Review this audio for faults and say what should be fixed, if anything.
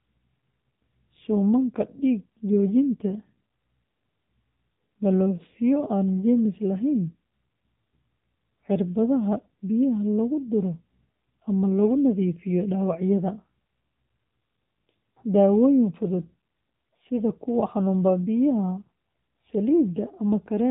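Throughout the speech, the sound is dull, buzzy and synthetic, with nothing above 4 kHz. This is AMR narrowband mobile codec damage: a frame-by-frame vocal tract model at 8 kHz sampling, which fits a low bitrate around 7.4 kbps. To prevent it, record directly or use a wideband path instead of a phone call.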